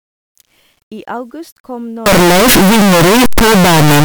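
From 2.06 s, right after "I august kom", to the end of the clip, the speech collapses into very loud, harsh distortion, with quiet stretches as loud as the rest. This is likely signed and unsigned mixed up in the 8-bit samples, flipping the top bit so each zero crossing jumps full-scale.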